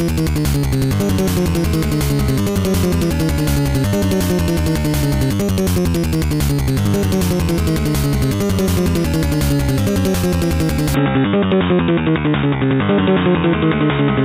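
At 10.94 s the system likely switched its input to a poorer device, such as another microphone or a headset's call profile, and stays on it until the end at 14.24 s. The new path passes nothing above about 3.8 kHz, so from that moment the sound turns dull and boxy. There is no gap at the switch and the level holds about steady, but a faint new background noise appears well below the signal.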